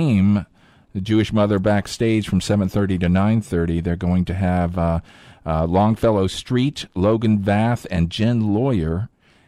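No technical faults are audible anywhere in the speech recording, and the signal stays steady and intact throughout.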